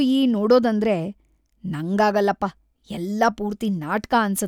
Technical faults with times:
0.39 dropped samples

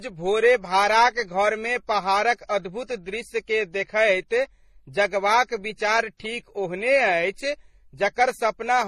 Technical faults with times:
0.00-8.87 transcoding between lossy codecs

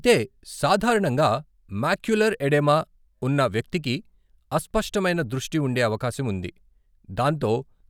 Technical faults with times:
none

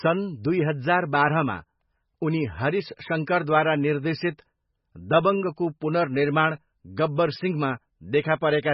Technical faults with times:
0.00-8.74 MP3 compression

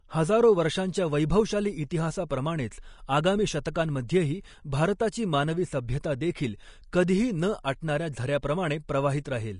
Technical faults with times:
0.00-9.60 Vorbis compression

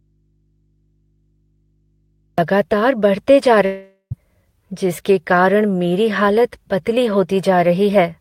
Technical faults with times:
0.00-2.38 audio dropout to a faint residue
3.65-4.13 long network dropout

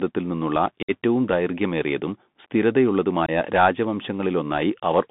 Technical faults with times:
0.00-5.10 Bluetooth CVSD headset codec
0.82-0.91 unconcealed Bluetooth headset packet loss
3.26-3.29 unconcealed Bluetooth headset packet loss

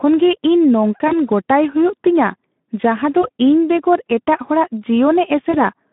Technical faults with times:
0.00-5.93 Speex codec
1.07-1.14 VoIP packet loss concealed by the speech codec
3.21-3.29 VoIP packet loss concealed by the speech codec
5.51-5.58 VoIP packet loss concealed by the speech codec

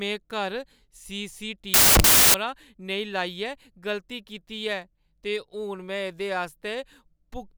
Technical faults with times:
1.74-2.34 samples built from the wrong bytes

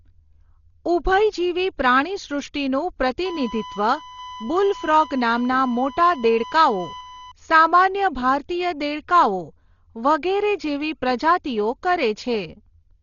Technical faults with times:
0.00-13.02 Dolby Digital compression
3.25-7.32 USB whine

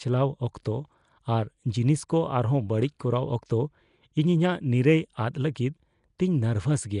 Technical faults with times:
0.00-7.00 Nellymoser compression

